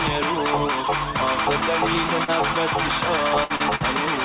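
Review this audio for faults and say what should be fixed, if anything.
Short concealed packet loss at 2.24–2.30 s and 3.56–3.62 s: about 40 ms each never arrived, so the receiver extended the preceding sound and blended back, leaving a brief smear.

Burst of packet loss at 3.44–3.52 s and 3.76–3.82 s: roughly 60 ms and 40 ms went missing in a row, heard as a fading continuation of the last sound before the audio resumes further on.

To prevent both, stabilise the network link and add forward error correction or a deeper jitter buffer so late or lost packets can be recovered. The narrowband call path, with nothing above 4 kHz, is consistent with a G.711-style codec.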